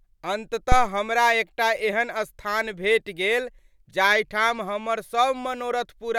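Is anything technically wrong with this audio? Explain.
Yes. From 0.72 to 0.92 s, just before "हमरा एकटा एहन स्थान", there is a phantom power thump: a supply switched on or off on the live input sends a voltage step through the coupling capacitors, producing a deep thump peaking near about -6 dBFS that dies away within roughly 45 ms.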